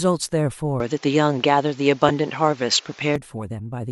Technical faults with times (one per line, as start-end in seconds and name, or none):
0.80-3.16 input switched to a poorer device
2.08 AAC frame loss with concealment